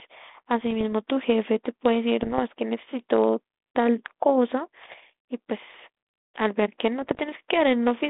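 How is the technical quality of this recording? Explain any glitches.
The recording has bit errors on an ADPCM link. Rough pops and bursts occur at 0.61–0.83 s, 2.23–2.41 s, 4.82–4.95 s and 7.02–7.21 s over a 200 Hz–3.6 kHz telephone band consistent with 32 kbit/s G.726. Corrupted bits throw off the decoder's step size and predictor, so each error rings briefly with level jumps. The densest errors, still under one percent, are around 4.8 s.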